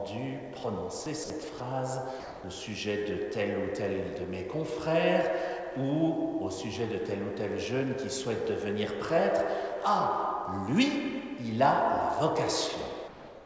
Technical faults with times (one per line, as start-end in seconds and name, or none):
1.04-1.60 sound dropped by the voice detector
2.20-2.44 sound dropped by the voice detector
13.08-13.46 sound dropped by the voice detector